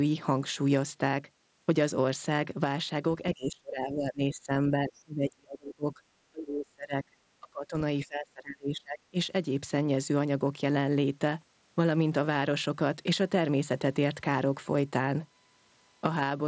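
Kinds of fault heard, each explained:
Speech suppressed in double talk: The speech dips sharply and breaks into pieces in five stretches between 3.34 and 9.17 s, falling by around 25 to 35 dB at worst. This is likely an echo canceller that turned the near talker down along with the echo while both sides spoke.
USB whine: A steady whine of fixed pitch at 1 kHz sits under the speech from 13.18 s to the end, around 45 dB below it. It comes from the USB bus drawing current in 1 ms frames, which leaks into the audio through power or ground.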